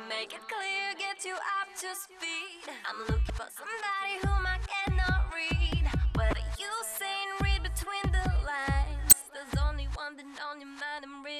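Damaged data in a compressed stream disrupts the audio at 3.27–3.30 s, 6.30–6.33 s and 9.10–9.13 s, each about 30 ms long. Corrupted frames throw the decoder out of sync until it finds the next valid header, leaving a brief chirp, squawk, click or hole. Each one shows as a narrow vertical band or gap on a spectrogram or waveform.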